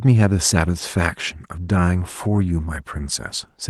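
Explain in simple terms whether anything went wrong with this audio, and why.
Two brief rough patches, at 0.79–0.81 s and 2.35–2.37 s, are each a lost packet rebuilt from error correction: a backup copy filled the 20 ms, so there's no silent gap, just momentarily coarser, noisier speech.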